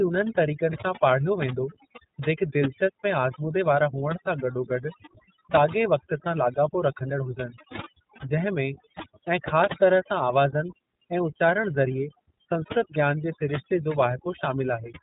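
Across the whole recording, from the first second to the last, the speech carries overdone noise removal. The reduction stage was set too aggressively, so any frequency band sitting close to its noise estimate is pulled far down or switched off, and the quieter parts of the voice are cut along with the noise. The background collapses to near silence dotted with twinkling, chirpy specks.

Running through the same full span is the damage of the iLBC codec, and it is plainly audible. The band stops sharply at about 3.8 kHz, which leaves the speech narrow and telephone-like with no air or sibilant detail. Each short block of excitation is coded on its own without drawing on the block before. The roughness and slightly synthetic grain fit 20 ms frames at the 15.2 kbps mode.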